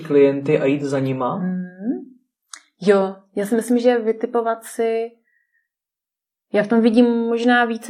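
From 0.0 to 4.0 s the speech plays as an adaptive stream starting at a low bitrate. The treble sounds dull and synthetic, which fits roughly 24 kbit/s HE-AAC. At 4.0 s the quality jumps without a gap. A spectrogram shows sparse, smeared upper bands, then detail up to about 14.9 kHz.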